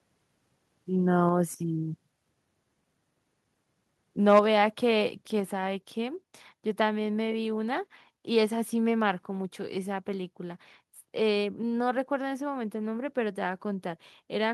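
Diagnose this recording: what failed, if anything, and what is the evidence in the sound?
At 4.29 to 4.39 s the speech peaks turn harsh and crackly, their tops flattened. This is microphone overload at the analogue-to-digital converter, likely from input volume set too high. The peaks run about 4 dB past full scale, with roughly 7 percent of samples clipped.

Voice and background drop abruptly in level at 1.29 s, 4.39 s and 5.4 s, by about 3 dB, about 4 dB and about 3 dB. The microphone volume was stepped down, likely by call processing lowering the device input gain after finding the microphone too loud or clipping. The 4.39 s drop follows the distorted burst directly.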